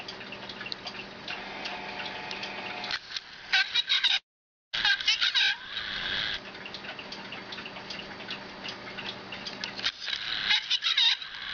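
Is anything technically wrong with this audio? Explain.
Yes, there are two faults close together.

Short concealed packet loss, 4.07 to 4.11 s: about 20 ms of audio arrived too late, and the receiver extended the preceding sound, leaving a brief smear.

Long network dropout, 4.17 to 4.75 s: the audio briefly continues as a fading tail, then goes silent for about half a second, likely because roughly 560 ms never arrived.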